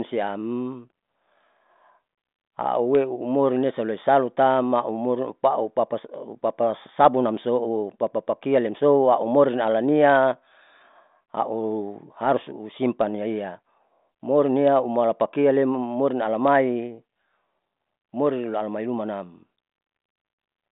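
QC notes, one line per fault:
No faults heard; telephone-band G.726 coding at 40 kbit/s.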